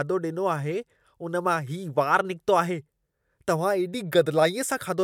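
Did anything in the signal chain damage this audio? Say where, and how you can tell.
No, nothing along the chain has left a mark on this speech that I can hear, so there's no stage to point at here.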